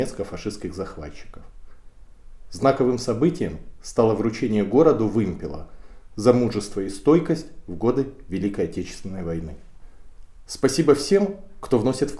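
No technical faults can be heard anywhere in the clip. Nothing in it stands out as a problem worth flagging.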